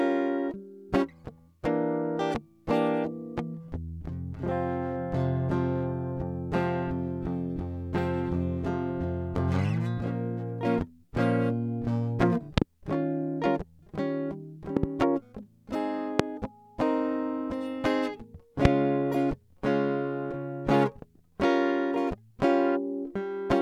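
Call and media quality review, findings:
Loud pop: likely voltage transients from plug, switch or static entering the chain. Sharp pops over the music: double at 12.58–12.64 and 14.77–14.86 s, single at 16.20–16.22 and 18.65–18.67 s, roughly 20–25 dB above it.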